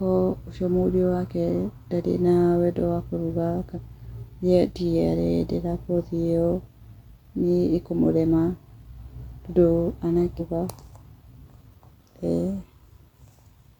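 Speech with damaged data in a compressed stream, heard as brief glitches at 3.72–3.78 s, just after "na wendo wa kũruga", and again at 10.36–10.41 s. At each point corrupted bytes make the decoder misread frames and hunt for the next frame header, leaving an abrupt jagged discontinuity in the waveform.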